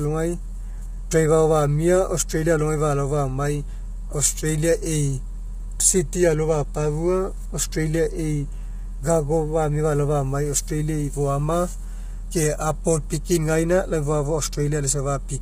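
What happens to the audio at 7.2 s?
At 7.2 s the speech sounds rough and grainy, with noise filling the gaps between pitch harmonics and nothing above 15.6 kHz, as it does throughout. The likely cause is heavy low-delay AAC compression, whose short frames blur harmonics at a rate fitting about 24 kbps.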